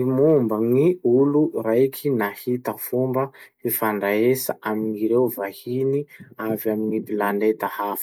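Hard clipping appears from 0.25 to 0.37 s, near the start of the speech. For about an eighth of a second the signal runs roughly 1 dB above what the stage carrying it can pass, so the highest peaks are sliced off flat instead of following their natural curve. Those squared-off tops generate extra harmonics well above the voice's own range. Because the overload is slight, it comes through as a brief crackle on the loudest moments rather than a continuous harsh fuzz.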